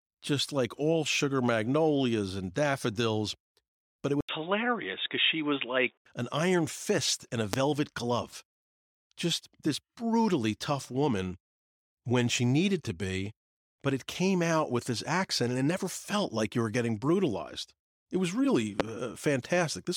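Input switched to a poorer device, from 4.21 to 6.05 s, just before "an iron fist in": the recording likely jumped to a different, lower-grade input mid-take. A brief gap of 80 ms marks the switch. After it the speech turns dull and boxy because nothing above 3.8 kHz gets through. The loudness stays about the same, but a faint new background hiss sits well under the voice. The fuller sound returns at 6.05 s.

Loud pop, from 7.53 to 7.56 s, right after "iron fist in a", and again from 18.80 to 18.82 s, after "was really": each is a single sharp click, likely caused by a sudden voltage spike from a connector, switch, static discharge or driver glitch. The downstream circuitry rounds it into a brief transient that peaks well above the speech. The voice continues uninterrupted beneath both pops.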